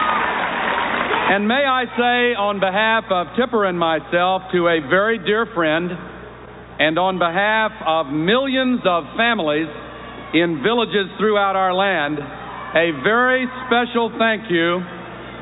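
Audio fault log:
Nothing here to log; I didn't hear a single thing go wrong anywhere in the clip.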